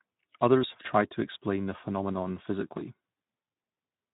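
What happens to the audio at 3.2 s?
The processor fell behind from 2.68 to 3.26 s, just after "to explain the phenomenon", missing a few dozen deadlines in a row on very short buffers, well under a millisecond each. Each missed buffer replays a scrap of old audio with hard edges, so around 3.2 s a gritty processor overload crackle tears across the sound until the load eases.

Underneath, the Speex codec has too few bits for the excitation, which fits a low rate of about 11 kbps. It leaves the speech audibly hoarse and noisy, and nothing is present above 3.8 kHz.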